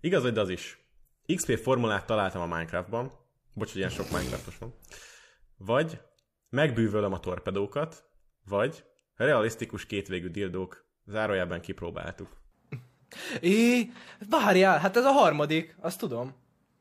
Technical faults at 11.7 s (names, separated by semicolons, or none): none